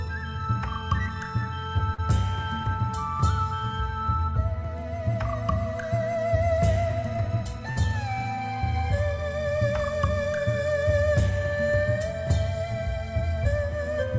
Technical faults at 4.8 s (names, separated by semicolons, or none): none